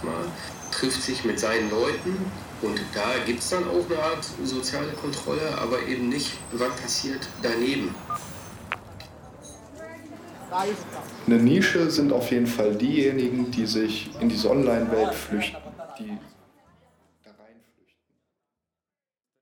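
No technical faults can be heard in the signal, and the smooth fade-out over roughly the last four seconds, starting at about 15 s, is a deliberate editorial taper with no click or hard edge at the end.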